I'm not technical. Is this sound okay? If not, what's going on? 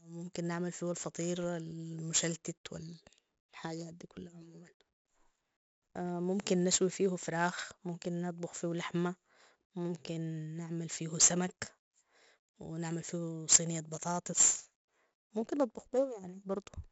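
No. 4-bit ADPCM compression runs through the whole recording, from start to finish. This squeezes the speech by storing each tiny slice of sound as a rough 4-bit guess of how much it changed from the last one. The guessing errors show up as a gritty hiss riding on every loud syllable, with crunchy distortion on sudden, sharp sounds. Nothing above about 7.7 kHz remains, so the voice also sounds dull and muffled.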